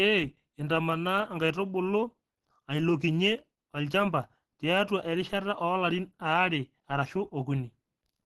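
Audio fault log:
throughout: Opus compression, likely the cause of plainly audible damage. The speech sounds muffled and hoarse, and nothing reaches above 12.1 kHz, as the codec's hybrid speech mode spends scarce bits on the lower band. The damage fits a rate near 16 kbps.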